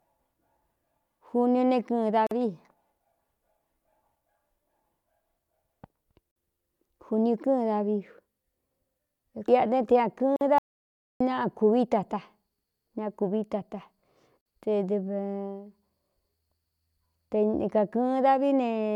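At 2.27, 6.31, 10.36 and 14.41 s, the speech breaks briefly. These are gaps at a join of encoded pieces, every 4.0 s. Each lasts about 46 to 49 ms. Separately encoded segments were joined with their padding left in. Edges are smeared by the codec. The third follows "te ña".

From 10.58 to 11.20 s comes an audio dropout to silence. For 0.62 s, speech and room tone vanish into silence. The input was likely lost while recording continued. Whatever was said then is gone.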